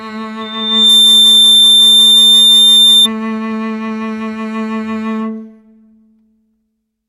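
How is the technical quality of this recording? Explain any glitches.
The music is marred by one serious fault. From 0.41 to 3.08 s a piercing 3.6 kHz tone swells over about half a second to sit roughly 15 dB above the music: loudspeaker feedback squeal, where a microphone hears its own loudspeaker and the loop keeps reamplifying that frequency.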